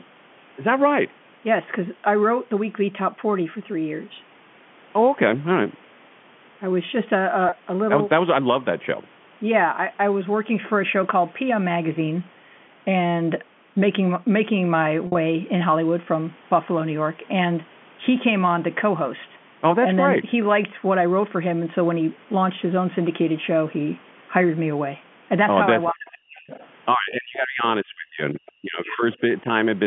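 At 7.49 s and again from 15.07 to 15.15 s there is packet loss with pitch repetition. The receiver bridged about 30 ms, then 70 ms scattered over 80 ms, by repeating the last pitch period. The first gap sounds like a brief buzzy hold, and the second is much longer.

From 25.91 s, the speech is suppressed in double talk in three stretches: 25.91 to 26.51 s, 26.93 to 27.64 s, and 27.83 to 29.18 s. The level drops by roughly 40 dB in the first two and roughly 35 dB in the last. This is likely an echo canceller turning the talker down while the far side speaks. Unlike the packet gaps, it sounds like the voice sinking and thinning, with no buzz.

The other side's voice leaking through overlaps those dips. It runs from 26.38 to 26.67 s at about 20 dB under the speech, then appears as faint scraps at 28.47 to 28.51 s and 29.12 to 29.16 s, about 30 dB down. The likely source is uncancelled loudspeaker echo. 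What identifies it is a second, separate voice rather than a change to the talker's own sound.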